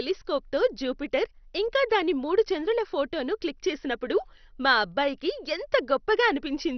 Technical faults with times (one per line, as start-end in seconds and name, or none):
0.00-6.77 MP2 compression